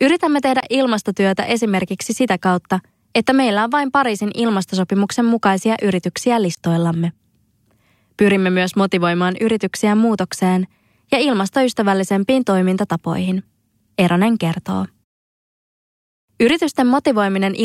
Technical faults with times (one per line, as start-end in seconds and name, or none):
0.60-0.63 block of digital silence
6.55-6.57 block of digital silence